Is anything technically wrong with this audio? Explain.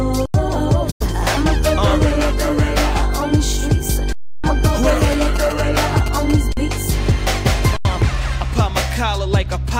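Yes. The audio has three kinds of fault: four underruns with held sample, one digital broadcast dropout and a stretch of GSM signalling bursts.

The underruns with held sample occur at 0.26–0.34 s, 4.13–4.44 s, 6.53–6.57 s and 7.77–7.85 s, lasting about 85, 312, 45 and 85 ms. Each time the output buffer ran dry and the converter kept outputting its last value. The sound stops abruptly, and when it returns the audio that should have played in between (roughly 100, 300, 50 and 100 ms) is gone, so it jumps ahead. The 85 ms gaps fit a 4096-sample buffer. On the waveform each gap is a perfectly flat horizontal line. On the spectrogram it is an empty vertical band.

The digital broadcast dropout runs from 0.90 to 1.05 s. The receiver lost two frames' worth of signal, about 85 ms, and muted until valid frames arrived again. The sound fades out over about 20 ms, stays silent, then resumes later in the programme, with the missing material lost for good. 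The waveform shows a short taper into a flat silent stretch. The spectrogram shows a blank column with softened edges rather than a sharp cut.

The GSM signalling bursts run from 4.65 to 6.32 s. They come from a nearby 2G phone exchanging short radio bursts with the network, which the audio circuitry rectifies into sound. The result is a galloping dit-dit-dit of buzzes at about 217 Hz, roughly 10 dB below the programme. The spectrogram shows clusters of evenly spaced horizontal lines at 217 Hz and its harmonics, switching on and off in groups. The waveform shows bursts of a fine regular pulse train riding on the audio.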